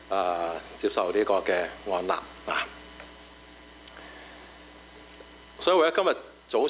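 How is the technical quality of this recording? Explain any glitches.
The recording has one fault, gain pumping, which runs through the whole clip. The audio is also band-limited, with nothing above 4 kHz, as expected from a narrowband telephone codec such as G.711.

Gain pumping is present from start to finish. The level swings by around 10 dB as the gain is pulled down on each loud sound. The likely cause is input gain set far too high, with a fast limiter clamping down on each peak. Loud and quiet passages end up squashed together.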